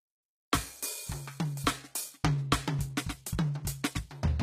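HE-AAC compression runs throughout. The music's treble stops above 14.9 kHz and is likely rebuilt from copied lower bands. The damage is plainly audible and fits a bitrate near 20 kbps.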